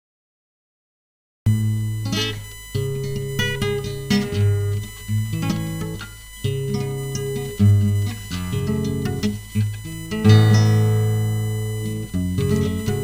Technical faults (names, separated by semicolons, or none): USB whine; cut-off start